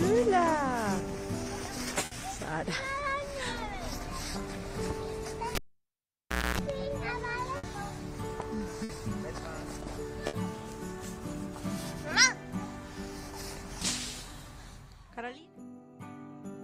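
The audio has four bursts of packet loss, at 2.05, 7.57, 8.83 and 10.27 s. Each time, roughly 60 ms of concealment carries the last sound forward as a fading buzz or hiss, then the audio jumps ahead with about 60 ms missing. A plain dropout would go silent and pick up where it stopped. From 5.55 to 6.59 s a cable is pulled and plugged back in. A pop opens about a second of near silence, a 60 Hz mains buzz lasts about a quarter of a second while the plug makes partial contact, and a second pop brings the sound back. The two pops and the hum set it apart from a network gap.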